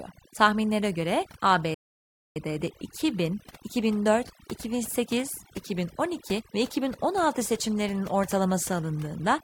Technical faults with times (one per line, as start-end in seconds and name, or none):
0.00-9.43 overdone noise removal
1.74-2.36 playback stall